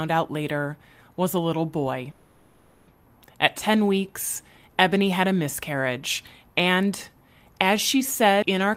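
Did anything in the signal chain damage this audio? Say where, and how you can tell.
Yes, in two places. From 2.11 to 2.90 s there is a call audio freeze, a network-and-buffer fault: the last sound is stretched into a fading buzz or hiss for about 760 ms, then the speech resumes exactly where it stopped. Nothing is lost; the stream simply runs 760 ms later afterwards. That is what sets it apart from a dropout or packet loss, where audio would be missing. Packets were likely held up in transit until the jitter buffer ran dry.

At 8.42 s there is a CD skip, a playback-stage fault. A mute lasting only a few milliseconds is followed by speech that continues from a different point rather than from where it broke off. The laser has jumped to another turn of the disc's spiral, so the content leaps by a whole number of revolutions. Unlike the freeze, nothing is held over or delayed: the player abruptly lands elsewhere in the recording.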